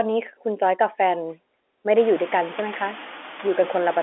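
Noise suppressor artifacts run through the whole clip. The suppressor cuts bands it judges to be steady noise by about 12 dB, frame by frame. The room noise jumps by about 24 dB around two seconds in and then sits only about 17 dB below the speech. The leftover noise dips in the pauses and swells under the speech. All of it is squeezed into the narrow telephone band.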